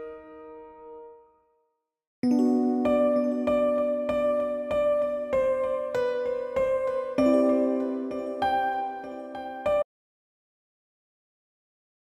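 An audio dropout to silence begins at 9.83 s and lasts to the end, about 2.2 s. The sound stops abruptly into total silence, with no room tone left. The input feed was likely lost while recording continued, writing only silence.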